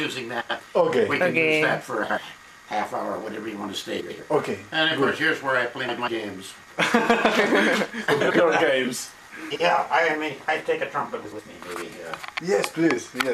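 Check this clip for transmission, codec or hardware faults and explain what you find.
One fault recurs seven times: frames out of order, at 0.40, 2.03, 4.00, 5.88, 8.20, 9.50 and 11.25 s. Each time, two neighbouring blocks of frames (about 46 to 93 ms each) were decoded in swapped order, so a short stretch plays halves-reversed, giving a brief garbled flutter and no lost time.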